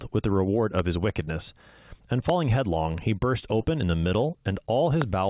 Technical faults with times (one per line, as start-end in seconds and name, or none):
0.79-0.81 loud pop
1.25-1.29 short concealed packet loss
2.29-2.31 loud pop
3.61-3.65 short concealed packet loss
5.02-5.04 loud pop